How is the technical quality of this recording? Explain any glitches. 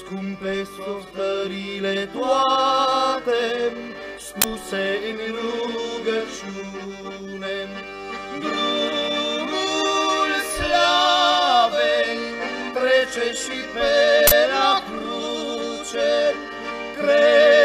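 The recording has two glitches, both from an uninitialised buffer. At 4.42 s there's a harsh 21 ms burst, and at 14.27 s a 43 ms one, fitting 1024- and 2048-sample blocks that played before any audio was written, so leftover memory came out as loud digital noise.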